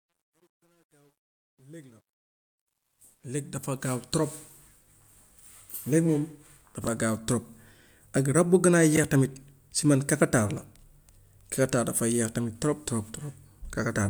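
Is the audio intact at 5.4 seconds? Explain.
No, from 5.39 to 5.46 s the frames are out of order: two neighbouring runs got swapped, so that bit plays with its halves exchanged, as a garbled flutter.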